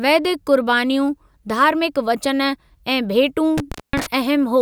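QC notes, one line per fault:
3.58–4.06 s, intermittent contact: the speech cuts out for 0.22 s, with crackle at both edges. A loose cable or plug briefly breaks the connection, leaving faint hiss.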